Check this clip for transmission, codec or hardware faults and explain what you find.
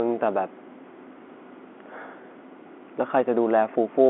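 No transmission, codec or hardware fault found; the speech carries the normal narrow telephone band of roughly 250 Hz to 3.4 kHz from G.711 coding, with at most a faint level-following quantisation hiss beneath it.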